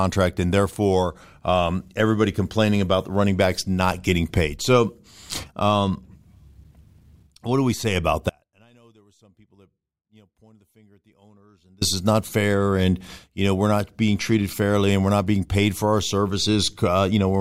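At 8.30 s, right after "do we say about", the speech drops out abruptly, with no fade, and returns at 11.81 s on "is not fair and". This is an audio dropout to a faint residue: for 3.5 s only a faint leak of sound remains, roughly 35 dB under the speech. The likely cause is a break in the signal feed while the path after it stayed live. The waveform collapses to a thin band with sharp edges, and the spectrogram shows a dim, near-empty block.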